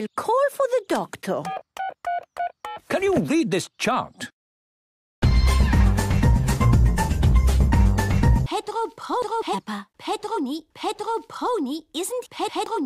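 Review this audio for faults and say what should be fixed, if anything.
Nothing here needs fixing: the signal holds steady throughout, with continuous playback and no audible disturbance at any point.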